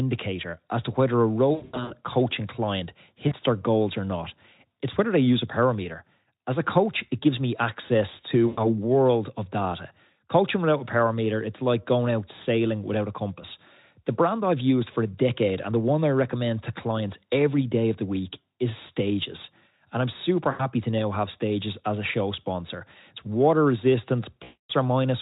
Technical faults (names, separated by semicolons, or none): VoIP packet loss concealed by the speech codec